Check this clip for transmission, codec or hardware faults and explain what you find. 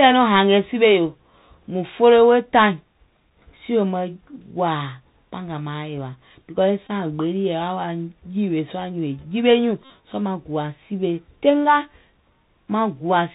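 Two faults are present: the Bluetooth CVSD headset codec, for the whole clip, and two short runs of Bluetooth headset packet repeats.

Throughout, the speech carries plainly audible Bluetooth CVSD headset codec damage, consistent with the 64 kbps CVSD link. The codec sends a single up-or-down bit per sample at 64 kHz and adapts its step size, with nothing passing above 4 kHz. The result is a muffled telephone-band sound. Loud, bright moments outrun the step and distort, sibilants turn scratchy, and a granular hiss sits beneath the speech.

Bluetooth headset packet repeats occur at 6.87–6.90 s, just before "gbee lii", and at 9.85–9.90 s, just after "jiwe nyùùŋ". Voice packets between headset and phone were lost, and the chip decoded the previous packet's bits again in their place. Each repeat lasts 3.75 ms, so the runs produce a brief buzz near 267 Hz. The first covers about 19 ms of lost audio and is heard as a brief buzz. 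The second covers about 53 ms and gives a longer buzz.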